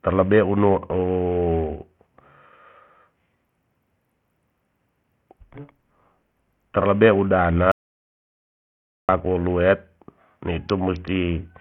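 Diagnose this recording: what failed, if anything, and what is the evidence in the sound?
Codec stage: heavy Bluetooth SBC compression is likely, since the speech has gritty sub-band noise and nothing above 16.5 kHz. That hard ceiling fits a low bit pool near 48 kbps, not gentle filtering.

Input or link stage: an audio dropout to silence runs from 7.72 to 9.09 s, about 1.37 s of pure silence with no room tone. That points to a lost connection rather than noise gating.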